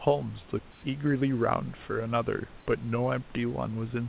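From 0.71 to 0.83 s the sender likely paused transmission during a gap in the speech, and the receiver filled those 120 ms with comfort noise in place of the background: a steady, featureless hiss at an unchanged level, about 24 dB below the loudest speech, without the room's detail.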